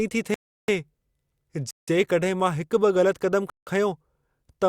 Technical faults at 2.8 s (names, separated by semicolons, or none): none